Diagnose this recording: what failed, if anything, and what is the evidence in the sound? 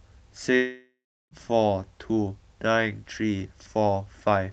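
The speech breaks off at 0.55 s and only resumes at 1.34 s, about 0.76 s later. The last sound is stretched into a buzzy tail that fades, leaving around 0.36 s of silence before the audio returns with that stretch simply gone. This is a long network dropout, likely at the network stage, with the receiver's concealment filling until it gives up. A brief packet loss would be patched seamlessly within tens of milliseconds, with no silence.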